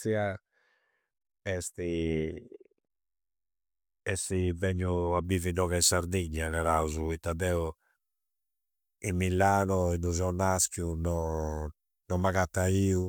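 Pre-emphasis left on affects the speech from 5.24 s to the end. The treble was lifted before transmission, following what fits the FM 75 µs curve, but the complementary de-emphasis was never applied on playback. The top end therefore stays raised, about 14 dB higher at 10 kHz than at 1 kHz. From that point the speech turns thin and glassy, with hissing, exaggerated sibilants and an edgy brightness that the first part lacks.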